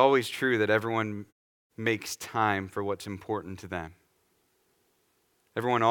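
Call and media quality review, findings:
No audible faults on the speech path; background drops to silence in the pauses and returns with the next sound, as expected from pause muting.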